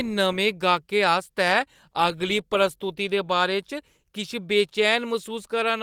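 No technical faults are audible.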